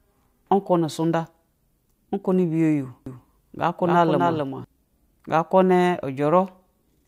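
A doubled audio track runs from 3.06 to 4.64 s: a second, full-band copy of the speech trails the original by roughly 300 ms, sitting around 5 dB lower. It carries no reverberant tail or room colouring, so it reads as a distinct slapback repeat rather than an echo, and it cuts in and drops out abruptly at those two points. The likely cause is the same signal reaching the mix twice, once through a slower path.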